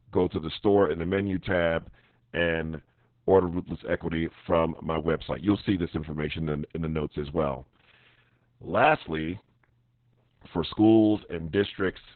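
Speech, with Opus voice compression throughout. Nothing survives above 4.3 kHz, so it sounds muffled, hoarse and slightly robotic. This fits narrowband SILK coding at roughly 6 kbps.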